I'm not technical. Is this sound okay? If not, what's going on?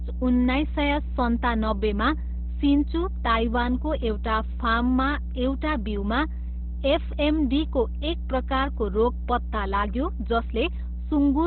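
No. From start to finish there's a loud, steady mains hum, a low 60 Hz drone from the power supply leaking in, sitting almost as loud as the speech. The voice also sounds muffled, hoarse and boxy, with nothing above about 4.2 kHz, likely from heavy Opus compression squeezing it down to phone-call quality.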